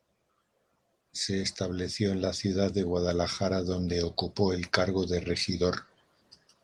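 Nothing stood out on listening to this speech recording.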